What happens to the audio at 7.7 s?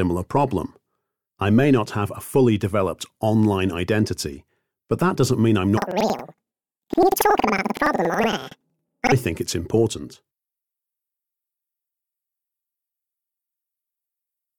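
At 7.7 s, planar audio read as interleaved is affecting the sound, from 5.77 to 9.16 s. Each 93 ms block, which fits 4096 samples, replays left then right at double speed: an octave up, fluttering at 10.8 Hz. A spectrogram shows doubled harmonics, with seams every 93 ms.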